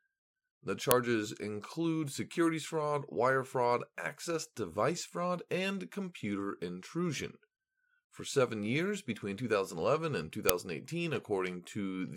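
A very short, loud crack comes through at 0.91 s, just before "include securities fraud wire", and again at 10.49 s. This is an uninitialised buffer: about 1.33 ms of leftover memory, consistent with a 64-sample block, played as audio before real samples were written.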